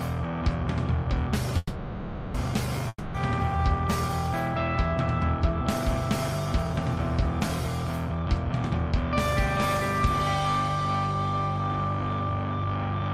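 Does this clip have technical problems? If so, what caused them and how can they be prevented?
Yes. From 1.57 to 2.36 s there is a call audio freeze. The last sound carries on as a fading buzz for about 0.77 s. Delayed packets likely drained the jitter buffer. Nothing is lost, but the audio resumes 0.77 s late. A larger adaptive jitter buffer and a steadier network path help prevent this.

From 2.88 to 3.16 s there is a long network dropout. Again the sound trails off as a fading hiss. This time the missing 0.26 s never returns, so the audio jumps ahead. Lost packets are the likely cause. Forward error correction or a more reliable connection prevents it.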